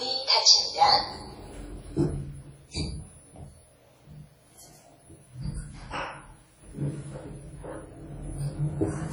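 An everyday sound recording whose whole length carries a ringing, washy texture, with a hiss that swells and fades along with the sound itself and smeared edges where transients should be sharp. Quieter details drop out, even though content still reaches about 20.1 kHz. The likely cause is heavy WMA compression: the transform codec spreads quantisation noise over long blocks and discards weak components, which fits a bitrate around 32 kbps.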